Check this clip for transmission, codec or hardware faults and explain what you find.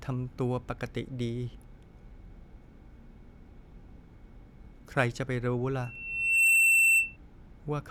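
There is one fault in this clip, a loudspeaker feedback squeal from 5.82 s to 7.17 s. The microphone picks up its own loudspeaker, and the loop gain at 2.7 kHz goes above one. That single tone swells over roughly the first 0.7 s to about 15 dB above the speech. A fixed interference whistle would hold a steady level, but this one grows out of nothing, which marks it as feedback.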